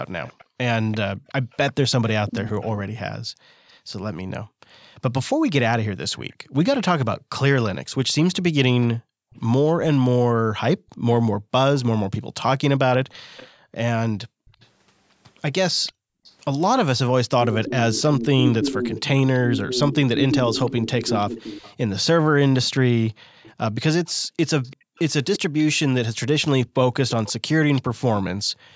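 From 0.26 to 27.82 s an echo leak, likely from a loudspeaker echo canceller letting some audio through, leaves a copy about 0.34 s behind the speech, roughly ten dB quieter. On a spectrogram it appears as faint repeated harmonic patterns trailing the phrases.

Background gated by the echo canceller occurs between 0.45 and 16.24 s (about 3 s in total), 23.11 to 24.96 s (about 0.7 s), and 28.42 s to the end (about 0.3 s). In these spans the room noise drops by as much as about 40 dB, which shows as a flat, near-silent waveform floor and blank spectrogram gaps.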